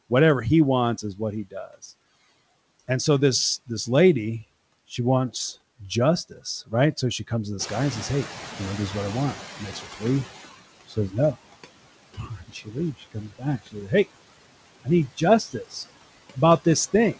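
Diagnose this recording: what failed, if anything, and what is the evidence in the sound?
The failure is in call processing, at the noise suppressor. Throughout the clip it pulls the background down by about 18 dB, but it does this band by band, frame by frame. The noise sinks between the words and rises under them instead of sitting steady. These are noise suppressor artifacts. Each band's gain keeps switching as the suppressor decides, moment to moment, what counts as noise.

The same stage also cuts speech. In six places soft parts of the speech sound swallowed or faint: 1.02 to 1.69 s (drop about 12 dB), 9.59 to 10.02 s (about 10 dB), 10.87 to 11.35 s (about 17 dB), 12.14 to 14.07 s (about 19 dB), 14.84 to 15.76 s (about 17 dB), and 16.34 s to the end (about 15 dB). The suppressor judged soft parts of the speech to be noise and attenuated them. The 12.14 s stretch is the worst, with roughly a second affected.

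The noise suppressor is also caught catching up. Around 7.5 s the room noise jumps by about 13 dB, settling about 16 dB under the speech. That jump is genuine room sound, not a fault. From 7.59 s the louder background comes through with less reduction, then sinks gradually until about 10.5 s, when reduction reaches about 15 dB. The suppressor's noise estimate took roughly 2.9 s to adapt to the new level. The band limit at 8 kHz fits a G.722 call codec, which is working normally.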